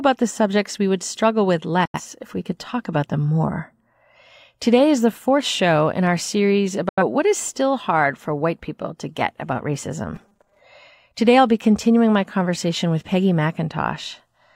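Speech that twice drops abruptly to silence, at 1.85 to 2.0 s and again at 6.89 to 7.02 s, each hole fading out within about 3 ms. These are digital broadcast dropouts: the receiver muted after frames were lost or failed their checks, discarding roughly 85 ms of programme each time, consistent with two lost frames. From 10.16 to 10.60 s the speech turns into a rigid metallic buzz pitched at 200 Hz that still loosely tracks the words. This robotic sound likely comes from repeated short buffers. The playback loops a 5 ms slice while new audio arrives late, so about half the real material is skipped.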